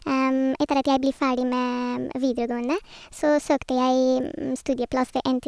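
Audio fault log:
Throughout: wrong sample rate. The speech plays about 1.38 times too fast and roughly 5.5 semitones high, so it sounds hurried and squeaky. Speed and pitch rise together. This fits audio recorded at 16 kHz being played back at 22 kHz without conversion.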